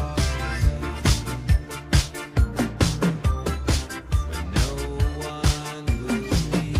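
No audible technical faults.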